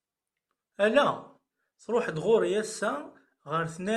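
No technical faults can be heard anywhere in the speech. There is nothing to mark at any point in time, since no event stands out from the surrounding audio.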